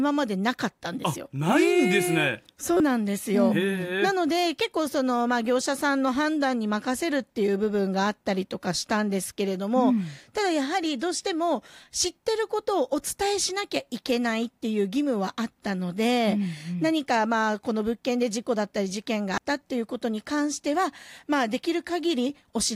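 Damaged data in a compressed stream shows up at 19.38 s in the speech as a single very short blip. Corrupted bytes there make the decoder misread the frame and lose sync until it finds the next valid frame header.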